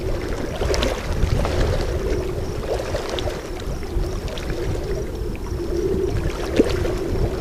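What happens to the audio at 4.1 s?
Nothing goes wrong at 4.1 s; the audio plays through that moment intact, with no dropout, click or other fault to be heard.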